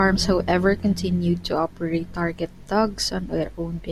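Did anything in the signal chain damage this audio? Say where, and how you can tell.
No, nothing in the chain audibly damaged this speech recording, and the signal sounds intact at every stage from capture to playback.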